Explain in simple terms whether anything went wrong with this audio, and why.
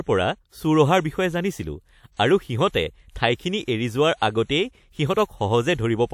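Pre-echo shows up five times, at 2.17, 2.69, 3.65, 4.18 and 4.44 s. Just before a sharp sound starts, a short hiss creeps in 23 to 56 ms early. The compression smeared its noise backwards into the quiet gap, so those attacks sound softened.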